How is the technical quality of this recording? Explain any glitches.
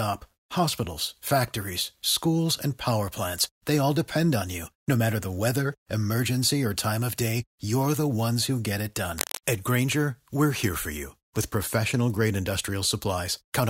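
The recording has one clear glitch, a brief burst of cable scratch noise. From 9.18 to 9.38 s, just after "ones who get it", a dense, ragged rustle sits over the speech, only slightly quieter than it. The likely cause is a worn cable or connector being moved, its contact resistance fluctuating rapidly and injecting uneven bursts of noise.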